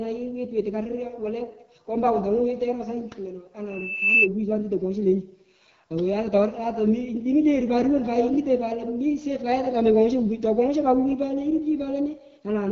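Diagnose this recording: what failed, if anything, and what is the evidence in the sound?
The failure is at the codec stage: the whole clip has been through the AMR wideband (HD Voice) codec, and a low-rate mode at that. The speech sounds rough and raspy from start to finish, and the top end stops dead at about 6.7 kHz. Below 6.4 kHz the codec rebuilds speech from a vocal-tract model excited by pulses, and that upper strip is just shaped noise. The plainly audible grit points to one of the two lowest modes, around 8.85 kbit/s.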